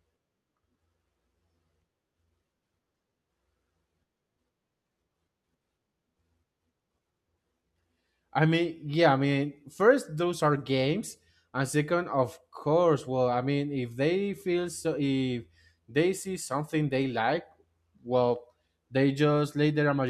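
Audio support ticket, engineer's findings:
No faults found on listening review of the speech recording. No symptom, timestamp or component to report.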